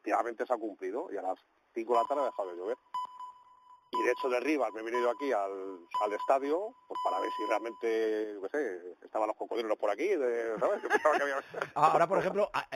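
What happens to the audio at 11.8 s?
At 11.8 s, as throughout, there is imaging from linear upsampling. The rate seems raised from 8 kHz by straight-line interpolation. Highs are dulled, with faint metallic mirror images at 4 to 8 kHz, about 30 dB down.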